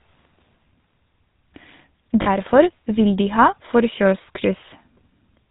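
Speech runs through the GSM full-rate codec for the whole clip, and the damage is plainly audible. The codec models the vocal tract and feeds it a sparse train of regular pulses, so the voice takes on a buzzy, gravelly roughness. Nothing above 4 kHz survives, which dulls the top end. The overall character fits a 13 kbps GSM stream. Lost GSM frames cause a short break from 2.22 to 2.28 s. About 40 ms of signal is missing, which fits two lost frames. The decoder fills the gap by repeating the last good frame's settings. That gives a brief, rough, metallic ring in place of the missing sound. The loss is too short to fade fully to silence.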